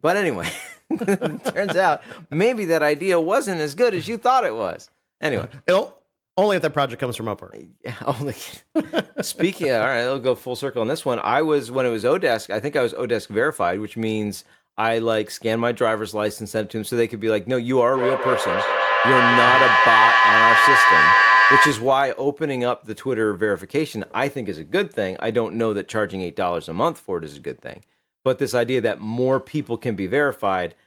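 From 17.9 to 22.1 s, feedback echo between two devices: speech returns roughly every fifth of a second, thinning and ringing, building to about 5 dB above the speech.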